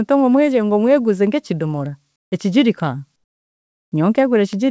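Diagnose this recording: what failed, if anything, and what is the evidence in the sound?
In the call processing stage, comfort noise replaces the background between 2.16 and 2.32 s and again from 3.16 to 3.92 s. The real room sound gives way to a steady, featureless hiss about 18 dB quieter, most likely from discontinuous transmission. A gate or dropout would leave silence, not synthetic noise.

A bit error spike at 4.53 s points to a flipped bit in storage or on a digital link. It spans two samples and is heard as one sharp broadband tick, unrelated to the sound and alongside the call codec's cutoff above 8 kHz. A buffer glitch would instead break the waveform's continuity.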